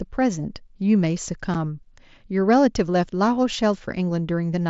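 A speech clip carried over a wideband Bluetooth headset link. The mSBC codec limits it to 8 kHz and adds a light grain on louder sounds. At 1.54 s there is unconcealed Bluetooth headset packet loss. The speech drops out for about 7.5 ms, which fits a single lost voice packet. Nothing fills the gap. The edges of the hole are abrupt.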